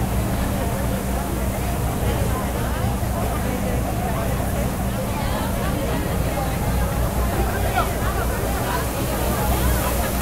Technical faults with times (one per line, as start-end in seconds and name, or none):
none